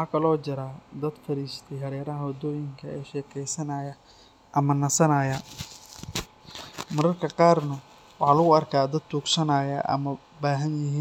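Listening to the speech recording, nothing stood out as a technical problem anywhere in it.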